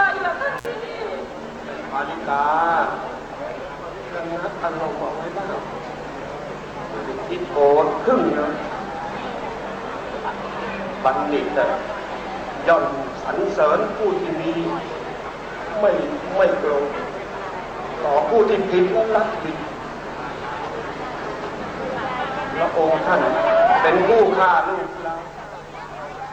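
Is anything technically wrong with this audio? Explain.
Yes. At 0.58 to 0.66 s there is an intermittent contact: a loose connection opens for about 54 ms, so the sound drops out with crackle at both edges and only faint hiss in between. The waveform shows a short near-flat gap bounded by sharp spikes, and the spectrogram shows matching broadband vertical streaks.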